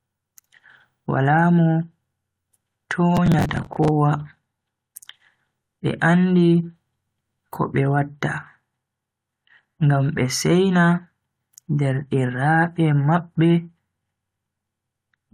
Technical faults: processor overload crackle

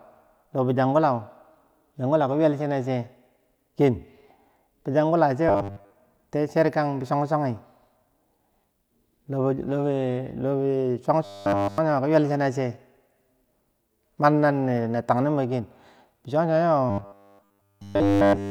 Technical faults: robotic sound from repeated short buffers

